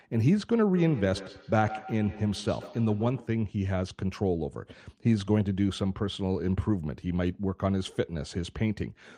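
Speech, and from 0.76 to 3.36 s there's a feedback echo between two devices. Every syllable comes back roughly every 150 ms or so, each return thinner and more ringy than the last, peaking at about 14 dB below the talker. That's two devices in the same room on one call: one plays out what the other's mic sent, that mic hears it again, and neither echo canceller touches sound it didn't play itself.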